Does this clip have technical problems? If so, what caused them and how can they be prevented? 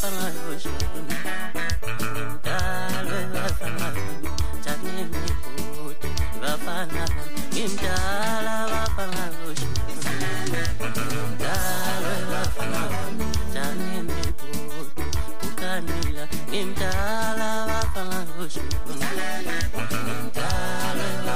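Yes. The clip carries a DC offset throughout: the entire waveform sits shifted off the zero line by a constant amount, about -18 dBFS. Nothing changes audibly, which separates it from low-frequency hum or rumble; those oscillate and can be heard, whereas this is a steady zero-hertz component that only eats headroom and shows as fixed energy at the bottom of the spectrum. Applying a high-pass filter or DC-blocking stage at recording prevents it.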